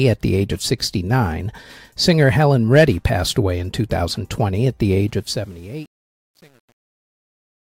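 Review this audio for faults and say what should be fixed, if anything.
Truncation distortion on a fade runs from 5.08 s, just after "at the", to the end at 7.76 s, and is worst from 5.41 s. As the fade-out from about 5 s drops, the fade stage keeps too few bits, which fits an 8-bit path without dither. The waveform collapses into coarse square steps, so the tail turns gritty. To prevent it, apply the fade at high bit depth and add dither before any reduction in word length.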